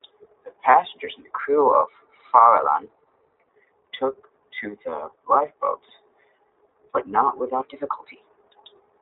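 The speech runs through the iLBC codec for its whole length. The sound is confined to a telephone band of roughly 300 Hz to 3.7 kHz, so it is thin and muffled at the top. Each 20 ms frame is coded on its own, and the damage is plainly audible. Voiced sounds come out slightly rough and synthetic. The texture fits iLBC's 15.2 kbps mode.

From 0.72 to 0.74 s there is a short gap from lost iLBC frames. The decoder fills it by repeating the last pitch cycle with some noise mixed in. It sounds like a brief, buzzy smear of held voice. The length points to a single lost frame. Because the frames stand alone, the voice recovers at once.

From 1.40 to 3.48 s the speech suddenly plays about 6.4% off speed. Pitch moves with it by about 107 cents, roughly a semitone. Then both snap back. This is a drift correction step, likely from software matching two clocks and changing the playback rate in one jump to manage its buffer.

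From 5.89 to 5.92 s a second set of lost iLBC frames brings the same brief buzzy fill, then clean recovery.

From 7.63 to 8.19 s the drift correction step returns. Speed shifts by the same amount, pitch by about a semitone, then snaps back.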